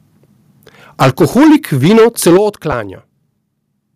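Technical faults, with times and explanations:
1.01 to 1.56 s and 1.83 to 2.37 s, microphone overload: the input level likely ran past the converter's ceiling, by about 14 dB and then about 11 dB, flattening the tops of a large share of the waveform. The loudest stretches of speech take on a harsh, crackling, buzzy edge.
1.03 s, 2.37 s and 3.39 s, microphone volume stepped down: the call software, likely reacting to the clipping, cut the microphone's input gain in single steps, by about 2 dB, then about 10 dB, then about 3 dB. Speech and background drop abruptly together, most noticeably at 2.37 s.
2.72 s, lost LE Audio frames: a single Bluetooth LE Audio frame of 7.5 ms went missing, and the LC3 decoder filled the gap by reusing the previous spectrum with scrambled phase. The result is a brief, noisy smear in the speech.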